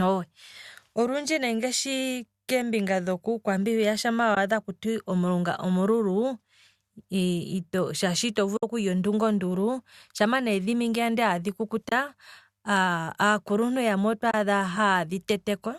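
Four short dropouts are from AAC frame loss with muting, at 4.35 to 4.37 s, 8.57 to 8.63 s (just before "okulya ondunga ondulu shama"), 11.89 to 11.92 s and 14.31 to 14.34 s. The decoder zeroed the missing frames, so overlapping windows fade the speech out and back in, leaving soft-edged holes of about 20 to 60 ms. Those gaps fit runs of 10 ms frames from a low-delay AAC stream, likely AAC-ELD.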